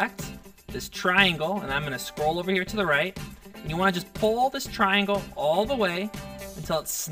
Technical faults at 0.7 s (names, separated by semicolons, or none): channel delay (comb filtering)